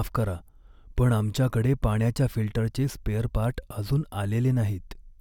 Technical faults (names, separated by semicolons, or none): none